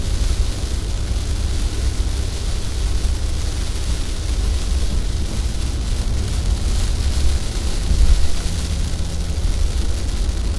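These everyday sounds run fast and high from start to finish, a wrong sample rate fault: the playback is 1.5 times too fast and about 7 semitones sharp, which fits 16 kHz material played at 24 kHz. Unlike a pitch shift or time stretch, speed and pitch rise together by the same ratio.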